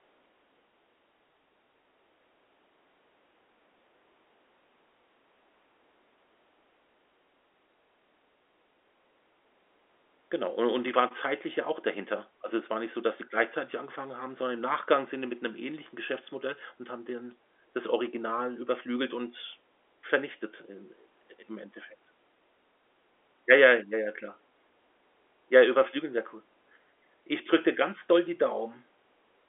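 No technical faults can be heard anywhere in the recording. The speech comes through G.711 telephone coding, so it has the narrow telephone band of roughly 300 Hz to 3.5 kHz, with nothing above about 3.7 kHz and at most a faint level-following hiss from the logarithmic coding.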